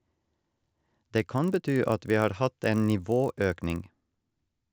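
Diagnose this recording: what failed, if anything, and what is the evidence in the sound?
Resampler restarted on every block, throughout, in sample-rate conversion: a 50 Hz buzz under the speech fits 20 ms blocks resampled from 16 to 48 kHz independently, with each edge slightly wrong.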